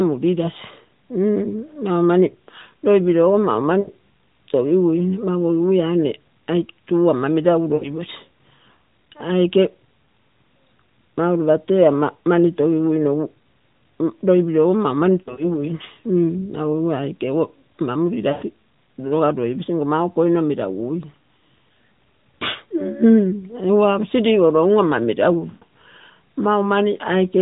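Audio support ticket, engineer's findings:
Lost AMR speech frames: short smeared, fading dropouts of 80 to 120 ms at 3.80 s (after "loipilogo mau"), 7.74 s, 15.22 to 15.52 s (scattered, after "loipilogo mau mani"), 18.32 s (before "noga loiposi") and 25.50 s. On the 4 kHz-limited AMR-NB path, the decoder holds the last good pitch and vocal-tract settings with decaying gain across the failed frames.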